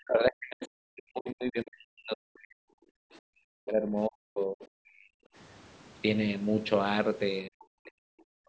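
From the start to 2.62 s, from 2.99 to 5.04 s, and from 7.46 to 8.21 s, the speech is suppressed in double talk. The voice sinks, at worst by about 40 dB. The likely cause is an echo canceller that could not tell the talker from the loudspeaker echo. It turned both down.

From 7.60 to 7.64 s, the other side's voice leaks through. It is a brief, faint scrap, about 35 dB below the speech. The echo canceller likely left part of the loudspeaker signal in the microphone feed.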